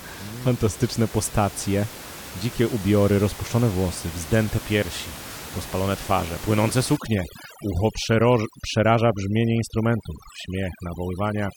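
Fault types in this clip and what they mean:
Overdone noise removal: an over-strong noise reducer, from 6.97 s after "piersi rozpalone twarze płynące", cuts bands near the noise estimate, leaving twinkling near-silence.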